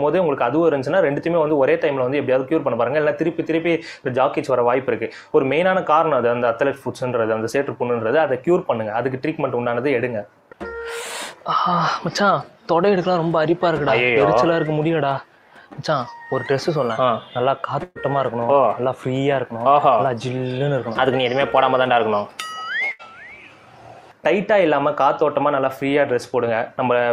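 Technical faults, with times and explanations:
17.83–17.98 s and 22.91–23.02 s: burst of packet loss. Lost packets left gaps of about 120 ms and 80 ms. The receiver stretched and faded the last sound to fill them, then resumed past the missing audio.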